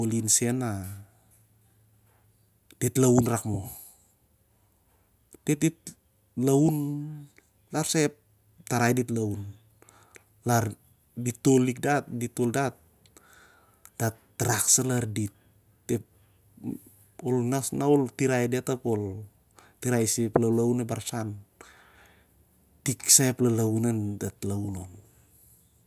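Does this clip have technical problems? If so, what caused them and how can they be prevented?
No, nothing in this speech recording sounds technically wrong, so there's nothing here to trace back or guard against.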